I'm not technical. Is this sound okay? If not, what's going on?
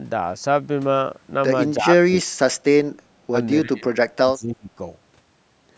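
No. The speech keeps sinking, thinning or breaking up at 1.78 to 2.27, 3.16 to 3.33, 3.63 to 3.96 and 4.16 to 4.80 seconds. This is speech suppressed in double talk, likely from the call's echo canceller turning down this voice while the other side talked. Unlike a network dropout, the voice is turned down by the call's processing rather than lost on the way.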